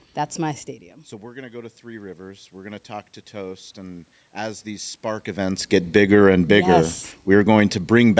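Around 0.5 s the talker moves away from the microphone and the level drops by about 20 dB. From 1.09 to 5.05 s the automatic gain control slowly raises its gain by about 9 dB, so the speech and the room noise swell together. On a waveform the envelope ramps upward. On a spectrogram the whole band up to 8 kHz brightens, including the noise floor between phrases.

Near 5.0 s the talker moves again. Automatic gain falling then follows twice: from 5.77 to 6.49 s and again from 7.2 to 8.15 s, each time lowering the gain by about 4 dB. Each step sinks the speech and background together, so the waveform envelope tapers and the spectrogram darkens evenly across all frequencies.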